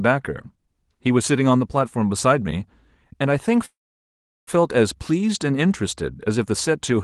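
From 3.65 s to 4.49 s the speech stops: a short buzzy continuation of the last sound fades into about 0.74 s of silence, then the talker resumes exactly where they left off. This call audio freeze likely comes from delayed packets draining the jitter buffer, inserting an 0.82 s gap without losing content.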